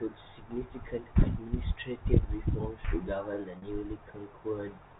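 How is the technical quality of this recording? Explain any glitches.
One glitch, at 3.58 to 3.62 s: packet loss with pitch repetition. About 40 ms went missing, which fits two 20 ms packets, and the receiver bridged it by looping the last pitch period. The result is a brief, slightly buzzy held tone, not a drop to silence or a stuttered syllable. The G.711 telephone coding underneath keeps everything below 4 kHz.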